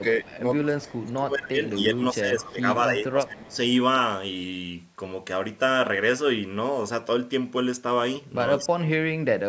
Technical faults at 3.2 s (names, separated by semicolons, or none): speech suppressed in double talk